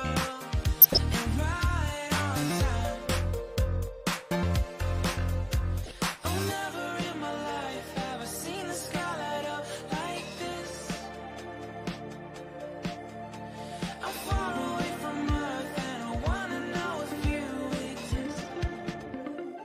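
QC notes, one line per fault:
0.79–0.98 s and 5.84–5.91 s, corrupt frame decoded. Both spots carry short chirps, blips or bursts of noise that do not belong to the sound around them. Damaged bits in the compressed stream were decoded as if valid. Misread gains and codes pushed energy into the wrong frequencies. The first burst spans about seven frames and lasts longest. The second is briefer, covering a few frames. Each ends as clean frames resume.
18.01–19.64 s, time-stretched section. The final stretch suddenly runs at 1.93 times the earlier pace. The pitch does not rise with it. The audio sounds rushed to the end of the clip. This is likely from software squeezing the passage to fit a set length. It held the pitch by dropping short slices.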